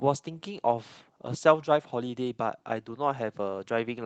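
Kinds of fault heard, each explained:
No faults heard in this speech, which went through a WebRTC call path using Opus at 24 kbps.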